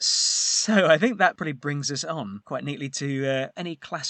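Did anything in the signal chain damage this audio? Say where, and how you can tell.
No, nothing in this speech recording stood out as damage from any stage of the signal chain when I listened to it.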